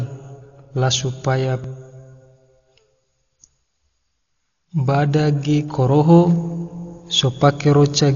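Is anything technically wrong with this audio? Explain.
Yes. Two faults stand out in this speech.

Throughout the clip, the speech sounds dull and muffled, with a rough, fluttering grain around the voiced sounds. Nothing is present above 6.9 kHz. The likely cause is heavy Dolby Digital compression, which fits a bitrate near 40 kbps. At that rate the encoder cuts the top of the band. It also leaves many frequency lines without detail, and the decoder fills them with noise. That creates the grainy flutter.

At 1.64 s, just after "la supaya", there is a small jump in the sound. This is likely a dropped buffer (overrun). The program failed to collect a block of samples before the hardware wrote over them. Roughly 10 ms of audio vanished. The two sides were joined directly, with no gap of silence. At the abrupt splice the speech skips slightly ahead.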